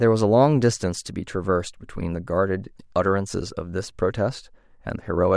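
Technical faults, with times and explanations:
No technical faults are detectable anywhere in this speech recording.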